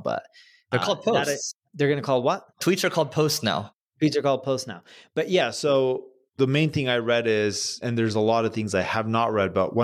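From 5.41 s to the end, the speech shows a wrong sample rate fault. The audio slows to about 0.92 of its proper speed, and its pitch drops by about 1.5 semitones at the same moment. That shift in pitch and timing fits audio captured at 48 kHz being clocked out at 44.1 kHz with no rate conversion. Every sample stays intact but is stretched in time, so the voice comes out slightly lower and slower than before the change.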